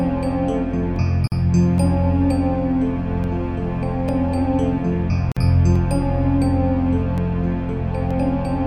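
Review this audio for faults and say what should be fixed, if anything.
Sharp single clicks occur at 0.96, 1.78, 3.24, 4.09, 5.76, 7.18 and 8.11 s. Each is likely from dropped samples, under a millisecond lost. The waveform jumps to a later value, so nothing audible goes missing. Keep sample transfer continuous, with adequate buffering.

A gap at a join of encoded pieces opens at 1.28 to 1.32 s (about 44 ms) and at 5.32 to 5.37 s (about 49 ms), four seconds apart. Each encoded piece kept its leading delay and padded final frame. Trim encoder delay and padding before joining, or encode the material as one piece.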